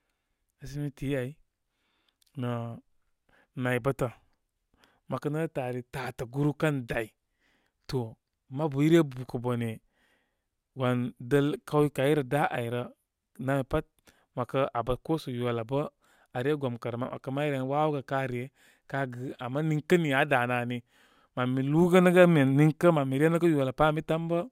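Imaging from linear upsampling runs through the whole speech clip. The rate was raised by joining samples with straight lines, which fits a rise from 22 kHz to 44.1 kHz. The top end sounds dulled. A faint mirrored copy sits between 11.03 kHz and 22.05 kHz, roughly 35 dB down. It adds a light metallic shimmer to sibilants.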